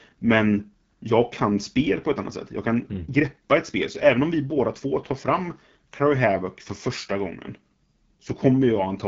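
AMR wideband (HD Voice) codec damage runs through the whole speech clip. At 8.85 kbit/s, the second-lowest rate, the pulse-driven vocal tract model leaves voices plainly rough and raspy. Content above 6.4 kHz is synthetic shaped noise, and nothing remains above 7.5 kHz.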